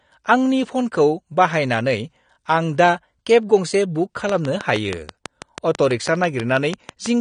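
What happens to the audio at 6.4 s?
At 6.4 s the audio sits inside a train of clicks that runs from 4.29 s to 7.07 s. Short pulses of much the same shape tick over the sound at a regular pace, about 6.2 per second, around twenty in all. They stand about 15 dB above the signal and carry on through pauses. Something is injecting a pulse again and again. The likely cause is interference from nearby equipment, or a faulty connection or power supply.

The same moment also carries AAC compression, which runs through the whole clip. Nothing is left above 9.7 kHz, and the codec damage is plainly audible, with a dull, smeared quality. AAC-LC splits each frame into frequency lines and quantises them against a hearing model. When bits are scarce it lowers the cut-off and thins or fills parts of the spectrum. The likely cause is AAC-LC encoding at around 32 kbps.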